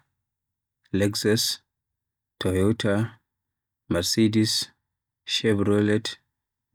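Listening to the speech recording, nothing stood out as a technical fault at any point.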